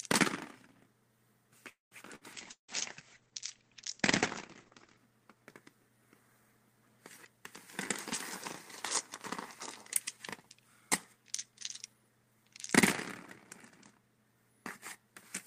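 At 1.69 s the sound stalls for about a quarter of a second, until 1.94 s. The last bit of sound is stretched into a fading buzz or hiss, then there's roughly 160 ms of near-silence before things pick up exactly where they left off. Nothing is lost; everything after simply lands about 220 ms later. That's a call audio freeze, likely packets held up in transit while the jitter buffer ran dry, so the receiver had to fill the wait itself.

Right after, from 2.15 to 2.24 s, there's a short burst of packet loss. The receiver carries the last sound on for about 57 ms, getting quieter as it goes, and then jumps ahead. About 60 ms of the original audio is just gone. You hear it as a small smeared hiccup with a slight skip rather than a pause.

From 2.34 s to 5.09 s there's a call bitrate drop. The encoder falls from 40 kbps to 12 kbps and sits at the bottom for nearly 2.7 s. With that few bits the coding gets coarse and the bandwidth narrows from about 20 kHz to 8 kHz. 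Everything turns dull and a bit watery, with the top end clearly missing, until the rate comes back up around 5.1 s.

Inside that muffled stretch, at 2.51 to 2.71 s, there's a long network dropout, likely a gap where no packets got through at all. The receiver fakes continuity for about 170 ms with a decaying buzz or hiss that settles into roughly 110 ms of silence. When the audio returns it has skipped ahead, and about 180 ms of the original never plays.

Later, from 11.13 to 12.52 s, there's a jitter buffer speed-up. The buffer had built up more audio than it wanted, so the receiver trimmed lots of tiny pitch-period-sized slices to catch up, something like 150 ms in total. Playback runs at about 110% speed with the pitch unchanged, so that section feels slightly rushed and any rhythm in it loses its steadiness.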